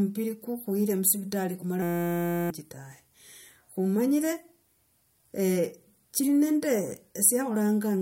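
From 1.82 to 2.50 s the speech gives way to a system hang loop: the driver stalled while the hardware replayed one 5.8 ms buffer segment over a hundred times, which fits a 256-sample buffer. It sounds like a steady 172 Hz buzz, losing roughly 0.7 s of speech.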